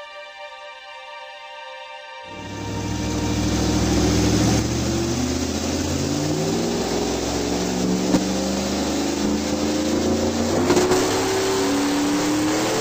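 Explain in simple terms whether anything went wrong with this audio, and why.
Nothing went wrong with this audio, because no fault can be heard anywhere in it.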